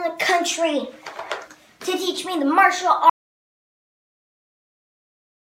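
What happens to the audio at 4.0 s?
At 4.0 s the audio is in a dropout to silence that starts at 3.10 s and runs to the end of the clip. The sound cuts off abruptly in mid-flow and what follows is complete silence, with no room tone or noise floor left underneath. That silence points to the input signal being lost, likely through a disconnected device, a broken link or an accidental mute, while recording continued. Whatever occurred after 3.10 s is gone.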